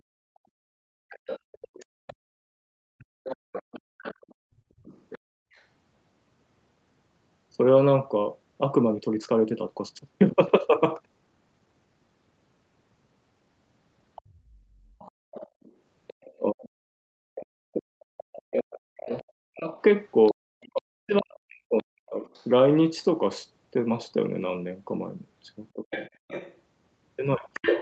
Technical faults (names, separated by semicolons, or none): background gated by the echo canceller; other side's voice leaking through; call audio freeze; jitter buffer speed-up; speech suppressed in double talk